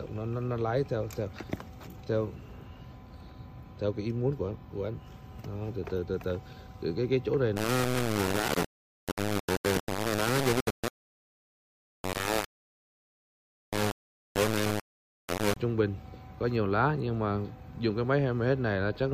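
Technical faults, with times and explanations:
7.56–15.57 s, low bit depth without dither: the sound turns coarse and gritty, with a grainy distortion that tracks the signal and shifts as it changes. The error is nearly as loud as the sound itself, so quiet passages break up, sputter between a couple of levels, or drop out. The likely cause is requantization to very few levels without dither, which fits rounding to about 3 bits; the rounding error stays tied to the waveform instead of spreading into a steady hiss.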